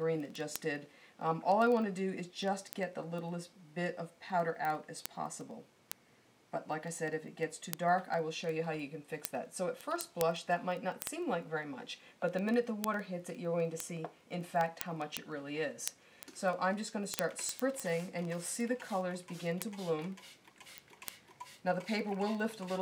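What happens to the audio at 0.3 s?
A steady stream of sharp, uneven ticks, about twenty per second, runs through the sound at 0.3 s and continues from 0.10 s to 22.80 s. These are word clock ticks: the receiver runs on its own clock, drifting by roughly 500 ppm from the sender, so one sample is dropped or repeated at each slip.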